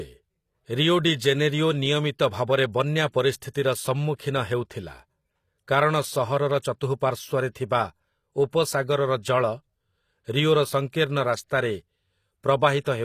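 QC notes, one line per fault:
Throughout: HE-AAC compression. The speech has plainly audible coding damage and nothing above 14.9 kHz. The upper band sounds bright but not quite real: the s sounds come out gritty, lispy and metallic. The likely cause is HE-AAC at a low rate, around 24 kbps, where only the lower spectrum is coded and the treble is rebuilt by copying lower bands upward under a coarse envelope, so harmonics fail to line up across the crossover.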